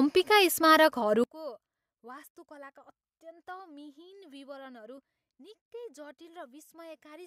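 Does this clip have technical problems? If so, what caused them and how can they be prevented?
Yes. From 1.24 s to the end, the speech suddenly falls by about 24 dB to a faint copy. The likely cause is one channel inverted: with one stereo side's polarity reversed, the centred voice cancels when summed to mono, leaving only the small difference between channels. A waveform shows the level collapsing at 1.24 s; a spectrogram shows the energy fading sharply there. Checking polarity with a correlation meter before mono summing prevents this.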